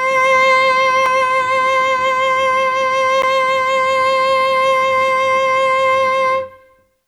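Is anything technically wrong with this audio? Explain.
Yes. The music drops out twice as a block of digital silence, at 1.06 s and 3.22 s. Each time the sound cuts out and comes back with no fade. The first hole lasts about 2.9 ms, which fits a 128-sample buffer, and it passes as a tick. The second, about 11.6 ms, fits a 512-sample buffer and also sounds like a tick or dip. Both point to output buffers that were not filled in time.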